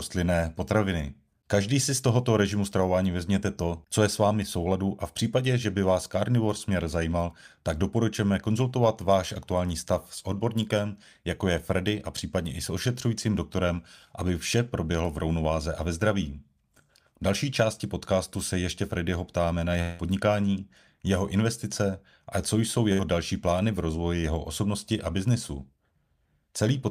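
At 19.81 s the stream was likely interrupted by a long network dropout: about 180 ms of audio never arrived, and the receiver covered roughly 174 ms of it by extending the last sound, which is heard as a fading buzz or hiss until the speech resumes at 20.02 s with that stretch missing.

At 22.93 s a burst of packet loss removed about 60 ms of audio. The receiver filled some 62 ms with a held, decaying copy of the preceding sound, and the speech picks up again at 23.02 s, skipping what fell in the gap.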